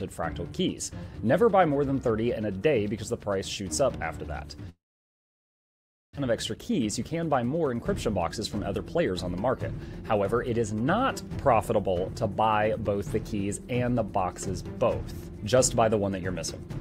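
From 4.69 to 6.19 s a long network dropout likely cut the stream. A brief fading buzz gives way to about 1.35 s of silence, and about a second of audio never returns. Jitter buffer speed-ups then drained the built-up backlog by trimming short pitch-period slices at 6.31–7.74, 8.22–9.49, 10.17–11.96 and 12.39–13.35 s, leaving the sound roughly 6 to 8 percent faster and hurried but unchanged in pitch.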